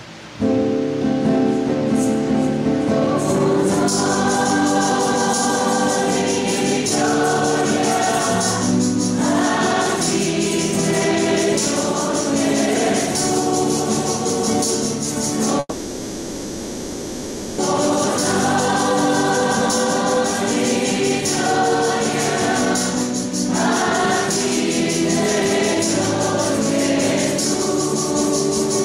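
At 15.59 s the sound stops moving forward and smears into a buzzy, fading hiss that fills almost two seconds, with only a brief instant of true silence, before the audio picks up at 17.60 s exactly where it left off. Nothing is skipped; everything after simply runs about two seconds late. This is a call audio freeze, likely from packets stalling in transit so the jitter buffer emptied and the receiver stretched the last sound until delivery resumed.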